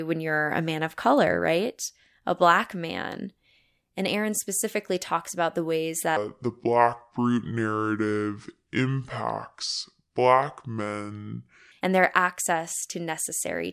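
From 6.17 s to 11.72 s, the samples are read out at only two-thirds of the rate they were captured at, with no conversion between the two. This is a wrong sample rate fault, and the ratio fits 48 kHz material played at 32 kHz. Because speed and pitch fall together, the speech in this stretch slows to 0.667 times its normal pace and drops about 7 semitones, sounding low, heavy and dragged.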